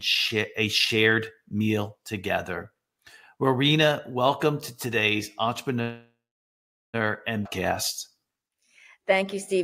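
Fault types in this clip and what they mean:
Call audio freeze: packets likely stalled and the jitter buffer emptied, so after "welcome to today's" the sound fades into about 0.8 s of silence, a 1.1 s gap.
Skip ahead: a stretch of queued audio was discarded, so at 7.44 s playback jumps forward roughly 0.7 s, joining both sides almost directly.
Jitter buffer slow-down: the buffer rebuilt its reserve by repeating short pitch periods, stretching 8.14 to 9.58 s to 93% speed at unchanged pitch, with drawn-out sounds.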